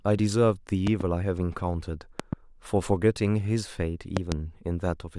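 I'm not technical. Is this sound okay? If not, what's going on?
No. The speech has three loud pops in it, each a pair of sharp thumps in quick succession: at 0.87 to 1.03 s, 2.20 to 2.35 s and 4.17 to 4.34 s. The last pair is the strongest. The talking carries on underneath each one. A loud pop like this is likely a sudden electrical jolt in the recording chain, such as a loose plug, a switch being flicked, static or a glitching driver.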